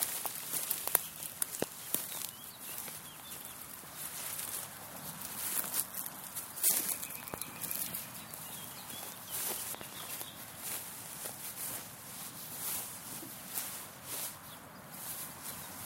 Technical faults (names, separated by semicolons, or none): loud pop